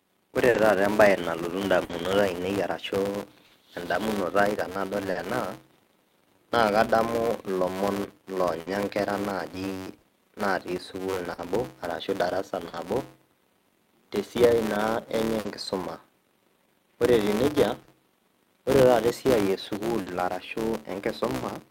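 Speech, and it has a buzz riding under it from start to finish, which is a filter restarted on every block. Some processing stage throws away its state at each block boundary and starts again from silence, so each block opens with a small transient. Those repeat at about 188 Hz, which fits a 256-sample block, so you hear a steady buzz whose loudness tracks the speech and fades when the speech drops. On top of that there's clock drift between sender and receiver: the sender's clock runs slow, by something like 4 percent, so the receiver's buffer keeps running short and it has to cover. That shows up in two ways. First, repeated timing corrections from about 3.12 s to 19.52 s: the receiver keeps repeating tiny slices to stretch the audio, playing at roughly 99 percent speed and adding something like 200 ms overall. The edits are small and unevenly spaced, so mostly you'd notice a slightly unsteady, dragging tempo or the odd soft hiccup. 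Second, the buffer actually runs dry a few times, giving short stalls from a late packet at 15.40, 17.83, 20.01 and 21.36 s. Each time the packet wasn't there when due, so the receiver held the last sound for about 50 ms until it turned up, then picked up from the same spot. Nothing's lost, but there's a brief held or buzzy smear, and the delay grows by about 50 ms each time. Separately there are two stretches of scattered short gaps, about 0.49 to 5.17 s and about 8.61 to 12.75 s. In each, around four packets went missing or arrived late, spread out rather than bunched, and the receiver papered over each hole by carrying the previous sound forward. The patches add up to something like 200 ms per stretch, the longest around 50 ms, a few percent of the span. So the speech stays clear but picks up little ticks, smears or hiccups dotted through those sections.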